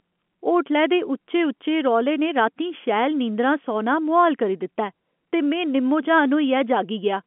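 No faults detected; the speech sits in a narrow telephone band of about 200 Hz to 3.4 kHz, with nothing above 4 kHz, as expected from normal G.711 telephone coding.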